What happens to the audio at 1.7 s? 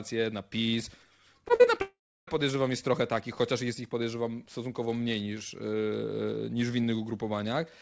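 Just before 1.7 s, from 1.55 to 1.66 s, the audio has short concealed packet loss: about 40 ms then 20 ms never arrived, and the receiver extended the preceding sound to bridge them. It's heard as a brief smear or wobble. On a spectrogram the filled stretch looks flat and repetitive before real detail resumes, with nothing above 8 kHz as usual for this G.722 path.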